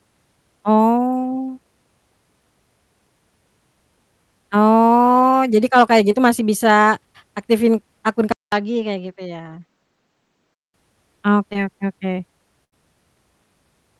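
At 6.11 to 6.15 s, between "kalau kayak" and "gitu masih bisa", there is a short concealed packet loss. About 20 ms of audio arrived too late. The receiver extended the preceding sound to cover the hole, leaving a brief smear.

From 8.32 s, just after "aktifin akun", the sound goes quiet for about 200 ms. It then returns duller and around 5 dB softer, with nothing above 7.8 kHz and a faint new noise floor. The likely cause is an input switched to a poorer device. This lasts until 10.74 s.

A second short concealed packet loss at 11.53 to 11.56 s causes the same brief smudge.

At 12.64 to 12.74 s, a burst of packet loss removes about 80 ms. The concealment holds and fades the last sound, then the audio jumps ahead.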